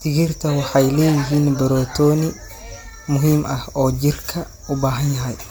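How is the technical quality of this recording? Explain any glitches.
The technical quality is compromised by one fault that runs through the whole speech clip. Generation loss is audible from start to finish. The sound is swirly, smeared and hollow, and consonant attacks blur. It points to MP3 at around 128 kbit/s, likely re-encoded about seven times. Each pass quantises on a shifted frame grid, so noise and spectral holes pile up. Nothing remains above 20.2 kHz.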